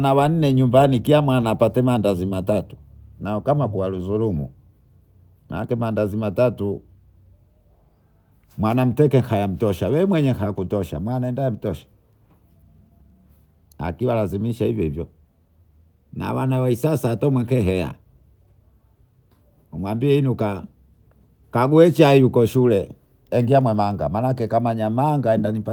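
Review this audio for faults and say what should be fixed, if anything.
Nothing to fix: no faults detected anywhere in the speech recording.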